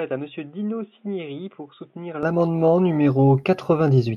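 Input switched to a poorer device, 0 to 2.23 s: the speech sounds dull, lacks content above 3.8 kHz and sits about 10 dB quieter, likely from a narrower-band microphone, then clears without a gap.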